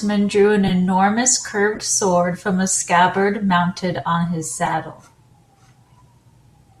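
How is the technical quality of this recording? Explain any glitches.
The recording has four short glitches from corrupt frames being decoded. They fall at 0.68–0.71, 1.75–1.82, 3.48–3.50 and 4.65–4.74 s. Damaged compressed frames were played anyway, so energy lands at wrong frequencies. Each sounds like a brief chirp or noise burst. The first and last are loud.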